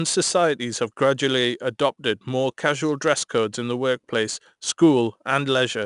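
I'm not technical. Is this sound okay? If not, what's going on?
No. Throughout, 4-bit ADPCM compression adds a gritty hiss that rises and falls with the speech, unlike steady background noise, and the sound is dulled above about 10.6 kHz.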